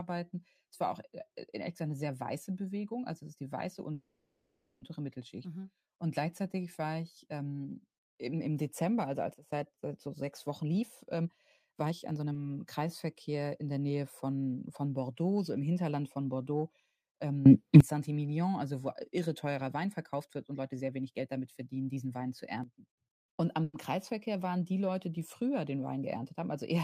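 At 3.93 s the speech hits a call audio freeze lasting until 4.83 s. The last bit of sound gets drawn out into a fading buzz or hiss, and roughly the final 220 ms of that stretch drops to near silence before things resume right where they left off. About 880 ms gets inserted with nothing actually lost. That's most likely packets stuck in transit draining the jitter buffer dry.

From 9.34 to 9.52 s there's a sudden gain jump down by about 16 dB. The speech and the background noise both drop together in a single step, with no fade, before recovering. That pattern likely points to a digital gain setting being applied without a ramp.

Right after, from 10.06 to 12.33 s, you get a jitter buffer speed-up. The receiver had too much queued, so it kept snipping out tiny pitch-period chunks, about half a second in total. The speech runs at roughly 125% speed with the pitch unchanged, so it comes across hurried.

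At 12.33 s there's a short stall from a late packet. A sound gets held about 20 ms too long with a slight buzz or dip before playback carries on, with nothing skipped.

At 17.46 s the level leaps up by about 20 dB, and noise rides up with it until 17.80 s.

From 19.66 to 21.97 s there's a second speed-up, milder at 115%, trimming roughly 0.3 s.

At 22.64 s the level steps down about 13 dB and holds until 23.01 s.

Finally, 23.64 to 23.76 s brings a tiny freeze. A brief 100 ms hold of buzz or hiss is inserted, then the speech resumes without a gap in content.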